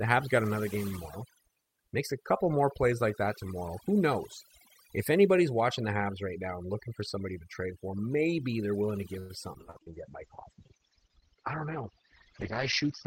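A speech recording whose background sits in an unnatural near-silence dotted with twinkling specks from start to finish. That is overdone noise removal: the noise suppressor was set so aggressively that individual frequency bands near its noise estimate are pulled right down or switched off, and the softer parts of the voice are stripped away along with the hiss. From 9.19 to 9.89 s the sound turns choppy, with four short holes, the longest about 96 ms, covering roughly a quarter of that stretch. This is repeated packet loss: each missing or late chunk is patched by stretching the last sound received, and the next dropout lands before the previous patch has settled, so pieces vanish. From 9.61 s to the end the voice becomes rough and muffled, with nothing above 6 kHz where the full band previously reached 20 kHz. This is a call bitrate drop, which fits the encoder falling from around 40 kbps to 8 kbps after the call's bandwidth estimate fell. 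At that rate the codec quantises far more coarsely and discards the upper frequencies, and it stays there for over three seconds. Between 9.80 and 10.67 s the delivery also drags slightly, running at about 96% speed with the pitch unchanged, so the sounds are drawn out. This is a jitter buffer slow-down: to rebuild its reserve, the receiver repeated single pitch periods and slivers of pause, adding about 39 ms in total.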